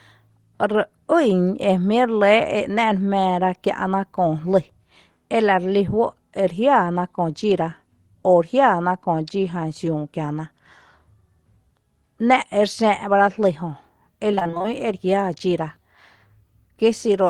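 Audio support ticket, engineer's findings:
Repeated packet loss (robotic sound), 14.31–14.66 s. Choppy stretch of speech. Nine short dropouts, longest 23 ms. Jitter buffer patched each by extending the last sound. Nearly half the span concealed. Probable component: network path into jitter buffer.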